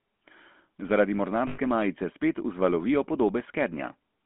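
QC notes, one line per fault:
throughout, GSM full-rate codec: The speech has been squeezed through the first-generation GSM codec, which fits its 13 kbps rate. The codec rebuilds the voice from a vocal-tract model excited by a sparse, regularly spaced pulse train rather than the true waveform. The telephone band of about 200 Hz to 3.4 kHz leaves it thin and muffled. The coarse excitation gives a plainly audible buzzy, gravelly roughness on every voiced stretch.
1.48–1.59 s, lost GSM frames: About 100 ms of coded audio never arrived, which fits five 20 ms frames. The decoder filled the gap by reusing the parameters of the last good frame. Instead of a clean break, the sound hangs as a short, rough, metallic ring before normal speech resumes on "majice spet vzvalovijo". The repeated excitation makes the held sound tonal and unnatural.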